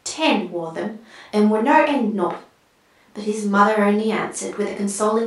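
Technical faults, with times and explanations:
Nothing technical stands out here; the speech comes across without any fault to point to.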